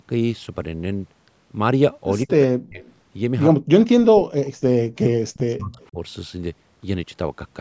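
Speech suppressed in double talk first appears from 2.24 to 2.83 s: the speech dips sharply, by about 40 dB at its deepest, for a few tenths of a second. The likely cause is an echo canceller that heard both ends talking at once, could not tell its own talker from the loudspeaker echo, and turned everything down. Straight after, from 2.83 to 2.93 s, an echo leak adds a faint copy of the speech 142 ms late, about 35 dB below it. This is likely loudspeaker sound the loudspeaker side's canceller failed to remove, which its microphone then sent back.

The same pattern repeats twice. Suppression returns from 3.63 to 4.68 s, muting or thinning roughly 0.7 s of that stretch, with a brief echo scrap at 4.45 to 4.5 s. From 4.96 to 5.97 s the speech is cut down again for about 0.7 s, and from 5.73 to 5.87 s the leaked echo is a little stronger, about 30 dB down, still trailing by 142 ms. All of this sits within a band that tops out at 8 kHz, with the bass trimmed by the call's normal microphone filtering.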